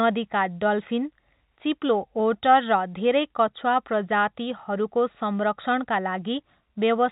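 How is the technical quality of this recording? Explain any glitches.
No glitches can be heard in this speech recording. It has the narrow telephone sound of G.711 coding, with nothing above 4 kHz and at most a faint grain that rises and falls with the level of the speech.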